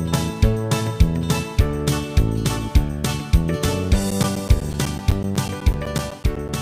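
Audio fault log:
4.11–6.49 s, periodic USB or driver dropouts: regular ticks every 0.125 s as about 10 ms gaps of silence repeatedly interrupt the audio, from a recurring bus or driver stall.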